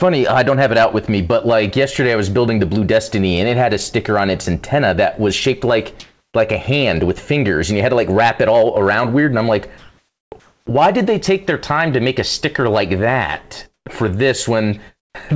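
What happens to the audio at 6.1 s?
Comfort noise in place of the background runs from 6.00 to 6.34 s, between "that was shaped like" and "like a hand with". The background there sits about 65 dB below the loud parts, likely low enough for the sender's voice detector to stop transmitting, so for 340 ms the receiver fills the gap with synthetic noise. The natural room detail gives way to a flat, featureless hiss whose level shifts by about 13 dB, ending when the speech returns.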